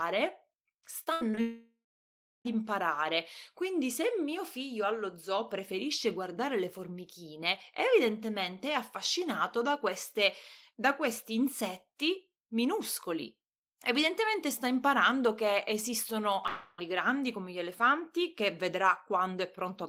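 From 1.03 to 1.39 s the speech turns choppy: repeated packet loss (robotic sound), four gaps with the longest about 79 ms, each patched by extending the preceding sound so that about 41% of the stretch is synthetic. Immediately after, from 1.41 to 2.47 s, a decaying buzz gives way to roughly two-thirds of a second of silence, most likely a long network dropout that skipped about a second of audio. At 16.47 to 16.80 s, between "sta imparando che esistono" and "grandi come gli elefanti", a fading smear of held sound replaces about 0.3 s of speech, likely another long network dropout, here without a silent stretch.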